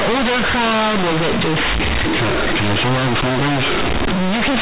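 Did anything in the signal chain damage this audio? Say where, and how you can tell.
Yes. The damage happens at sample-format conversion: companded audio read as linear, throughout the clip. The A-law bytes arrive at the proper 8 kHz telephone rate but are played as plain 8-bit samples without expansion. Each sign change swings across about half the range, so quiet sounds match loud ones and pauses fill with buzzy noise.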